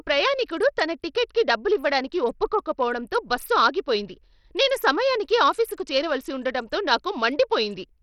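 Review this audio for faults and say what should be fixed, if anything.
Bluetooth SBC compression, throughout: the speech carries gritty noise, its treble flickers and drops out, and nothing sounds above 17.3 kHz. The likely cause is an SBC link starved of bits, fitting about 64 kbps, which leaves upper sub-bands empty and the rest coarsely quantised.

To prevent it, record over a wired connection or a higher-quality codec instead of a low-bitrate Bluetooth SBC link.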